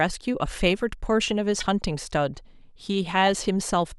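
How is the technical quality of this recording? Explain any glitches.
There's one glitch, a corrupt frame decoded, at about 1.60 to 1.63 s. A short stretch of compressed speech data got damaged bits, and the decoder played it anyway, putting energy at wrong frequencies. You hear a quick chirpy blip, peaking around -20 dBFS, roughly one frame long.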